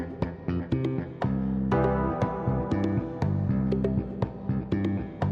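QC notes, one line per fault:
No audible defects found on review; nothing to log.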